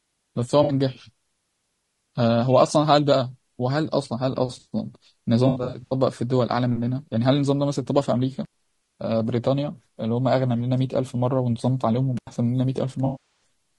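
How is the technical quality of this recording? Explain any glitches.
The recording has plainly audible codec damage throughout, plus several dropouts.

Low-delay AAC compression (throughout): the speech sounds rough and grainy with a dulled top, likely from AAC-ELD's short frames, at a rate that fits about 32 kbps.

AAC frame loss with concealment, at 0.63–0.73 s, 5.47–5.93 s and 13.05–13.43 s: the decoder patches lost frames from the last good spectrum. The first gap, 60 ms, leaves a brief smear. The second loses 240 ms scattered over 440 ms, with runs up to about 70 ms, giving repeated phasey patches. The last is 360 ms and sags toward silence.

Intermittent contact, at 8.45–8.54 s and 12.17–12.27 s: a loose connection opens briefly for 68 ms, then 85 ms, cutting the sound with crackle at each edge.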